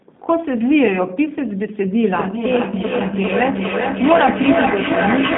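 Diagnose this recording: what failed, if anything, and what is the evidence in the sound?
The codec stage failed: the sound is G.729 coded throughout, with the band confined to about 150 Hz to 3.7 kHz and a plainly rough, synthetic texture. That fits an 8 kbit/s stream rebuilding speech from a filter, pitch predictor and sparse pulses.

At the call-processing stage there is feedback echo between two devices from 2.12 s to the end. Words return roughly every 0.4 s, reaching about 1 dB below the direct speech, so the repeats pile up rather than decay. A second device's playback is re-entering the microphone, outside any echo canceller's reach.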